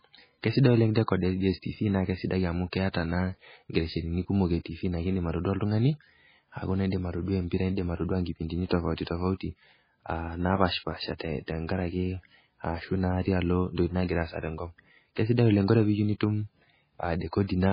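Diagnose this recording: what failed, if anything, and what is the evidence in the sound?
The codec stage is the likely cause: the whole speech track carries heavy MP3 compression. Nothing survives above 5 kHz, so sibilants lose their top end, and the remaining band has a watery, swirling texture as weak spectral lines drop in and out between frames. That combination fits a very low bitrate of around 16 kbps, where the encoder runs short of bits, imposes a fixed treble cut-off and discards low-level detail.

The same codec stage produces a pre-echo at 8.67 to 8.71 s. A short hiss spreads about 35 ms ahead of a sharp onset, and the attack itself sounds softened. The transform spreads its quantisation noise across the whole block, so noise sized for the loud onset also fills the quiet moment just before it.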